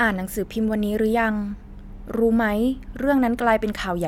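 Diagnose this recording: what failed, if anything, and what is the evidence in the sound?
Nothing in the speech signal points to a failure at any stage of the chain, so there is no fault to diagnose here.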